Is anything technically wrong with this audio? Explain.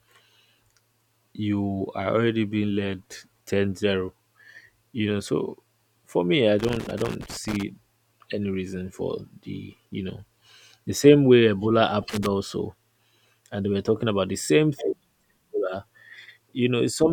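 Yes. Loose connector crackle occurs from 6.59 to 7.63 s, right after "so for me I", and again at 12.10 to 12.26 s: a worn contact intermittently breaks the signal, causing irregular scratchy bursts that appear as jagged dropouts and broadband vertical streaks.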